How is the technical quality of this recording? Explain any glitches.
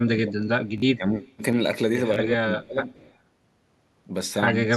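The recording has three kinds of fault, all typical of a live call path.

Speech suppressed in double talk affects 0.01 to 0.47 s, 0.97 to 1.21 s and 2.62 to 2.79 s. The speech dips sharply, by around 15 dB at its deepest in the first and third spans and about 10 dB in the second. The likely cause is both sides talking at once. The echo canceller then cannot tell the local talker from loudspeaker echo, so it ducks everything. The voice sinks for a moment.

A repeated buffer occurs at 0.78 to 0.82 s, 2.14 to 2.16 s and 3.42 to 3.44 s. A tiny slice of audio replays with hard joins. At 0.78 s it sounds three times in a row. The later two sound twice. Each repeat lasts 20 ms, which fits a 20 ms playback buffer. Fresh audio arrived late, so the device replayed what it had. The result is a quick stutter or buzzy click.

Echo leak appears at 1.22 to 1.36 s and 2.88 to 3.15 s. A faint delayed copy of the voice trails 172 ms behind. 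It sits about 25 dB below the speech in the first span and about 30 dB below in the second. The likely source is a loudspeaker on one side. Its canceller missed part of what the microphone picked up and sent it back. It sounds like a ghostly double.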